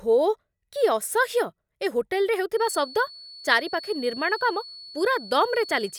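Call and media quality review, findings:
Feedback whistle, 2.52 s to end of clip: thin steady 4.4 kHz tone about 20 dB under speech, swelling and fading slowly. Likely speaker-to-mic loop held at the edge of feedback.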